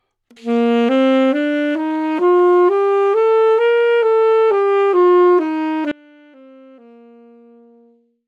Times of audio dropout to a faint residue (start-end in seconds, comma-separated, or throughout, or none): 5.92-8.27